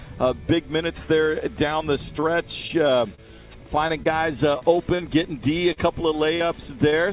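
From 2.2 to 3.2 s and again from 3.88 to 5.0 s, repeated packet loss (robotic sound) breaks the audio up. In each stretch four holes, the longest about 29 ms and 35 ms, are filled by extending the preceding sound, giving a choppy texture with pieces missing. On a spectrogram these show as brief frozen, smeared columns.

Short concealed packet loss follows at 5.73–5.78 s, 6.36–6.42 s and 6.90–6.94 s, each hole 20 to 40 ms long. The receiver patches each gap with a continuation of the last sound, heard as a quick smear or wobble. In the waveform these look like short, overly regular segments with soft joins.

Throughout, the narrowband call path leaves an empty spectrogram above 4 kHz, which fits 64 kbps G.711 A-law.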